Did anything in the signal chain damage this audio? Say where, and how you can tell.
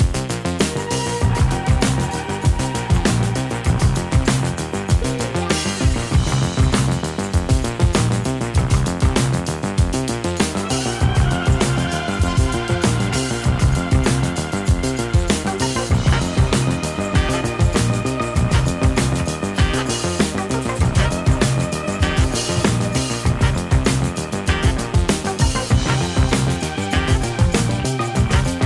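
No, no stage in the chain has damaged this audio.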